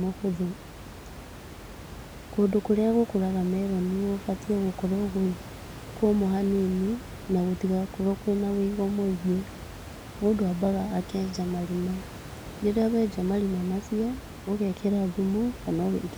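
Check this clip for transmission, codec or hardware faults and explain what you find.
No transmission, codec or hardware faults can be heard in this speech clip. Background noise from the room sits about 15 dB below the speech, which is part of the recording rather than a fault of the system.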